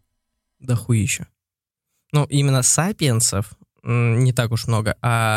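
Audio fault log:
No faults detected in this clip.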